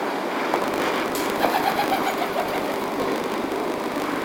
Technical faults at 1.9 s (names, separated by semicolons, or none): filter restarted on every block